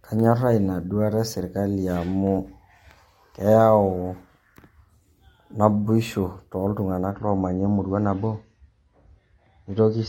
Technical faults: adaptive stream at a lower bitrate

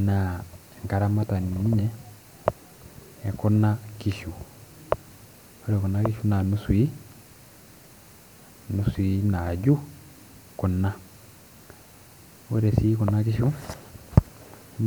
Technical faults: none

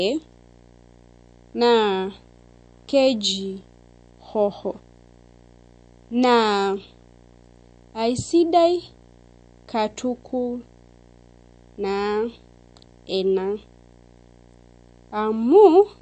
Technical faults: video or display buzz; MP3 compression

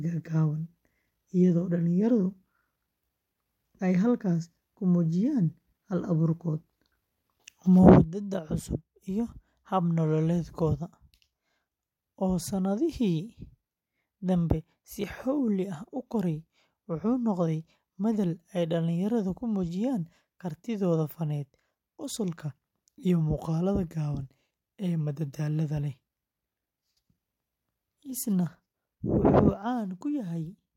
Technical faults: one channel drops out

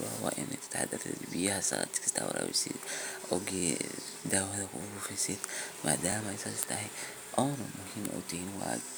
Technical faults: overlapping chunks

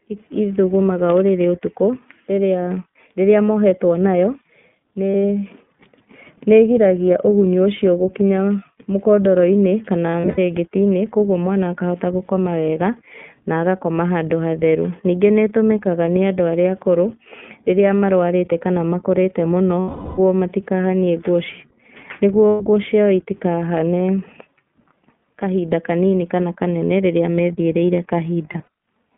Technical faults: iLBC codec; lost iLBC frames

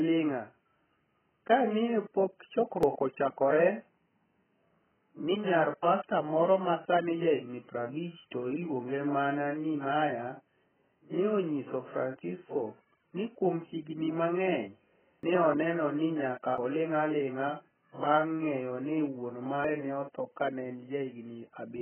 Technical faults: AAC compression; dropped buffer (overrun)

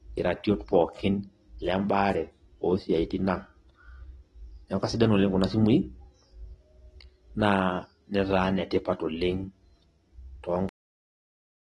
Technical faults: AAC compression; cut-off end

